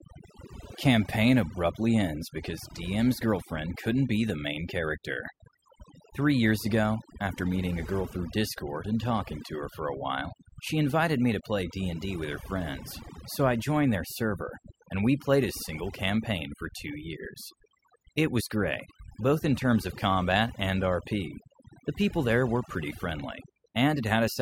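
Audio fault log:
throughout, overdone noise removal: noise reduction set too aggressively pulls bands near the noise floor down, leaving twinkling specks in near-silent gaps.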